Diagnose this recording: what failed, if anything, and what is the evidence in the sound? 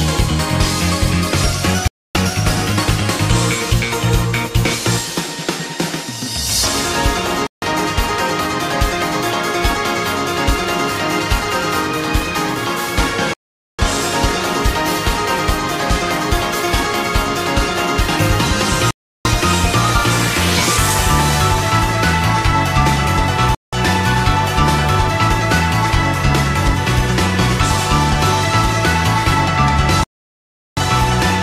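Bluetooth stalls at 1.88, 7.47, 13.34, 18.91, 23.55 and 30.04 s: playback-stage dropouts to silence lasting 0.15 to 0.74 s, then resumption, likely the headphone buffer draining while delayed packets were resent.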